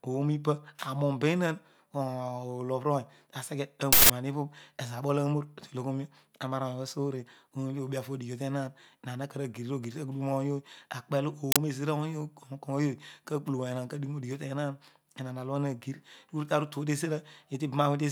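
At 3.93 s the speech is interrupted by an uninitialised buffer fault: for about 170 ms, to 4.10 s, a loud burst of harsh digital noise replaces the audio, which fits an 8192-sample block played out before anything was written into it, so stale memory contents were sent as samples. The same fault returns at 11.52 s, shorter at about 43 ms, consistent with a 2048-sample block.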